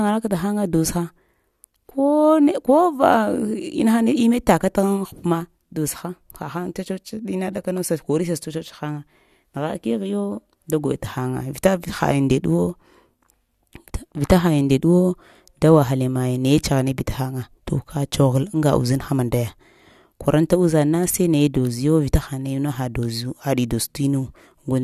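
Nothing in the recording stood out as a technical fault when listening to it.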